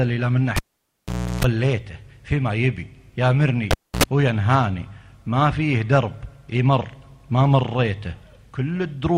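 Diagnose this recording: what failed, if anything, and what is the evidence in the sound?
Analogue wiring: a cable pulled and plugged in at 0.56–1.44 s and 3.71–4.04 s. Pops, near-silence and 60 Hz tip-contact buzz set it apart from a clean digital dropout.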